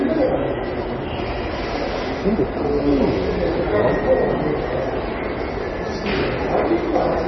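Throughout, likely heavy MP3 compression at a starved bitrate, consistent with about 24 kbps, cuts everything above 5.9 kHz and flickers weak components, leaving the sound dull, watery and swirling.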